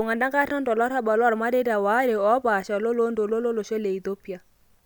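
A short bit of speech with nothing technically wrong to point to anywhere in it.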